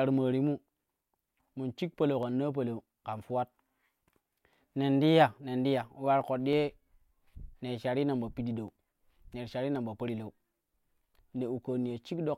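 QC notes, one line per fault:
1.16–11.9 s, clock drift buffer slips: a click recurs every 1.08 s through the speech, about ten in all. Each is a jump of only a handful of samples. The steady spacing fits two independent clocks disagreeing by roughly 150 ppm, which likely forces a periodic dropped or repeated block.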